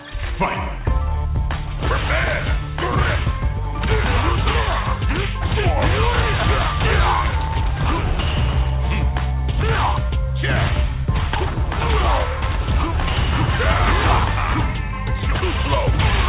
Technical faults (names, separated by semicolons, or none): none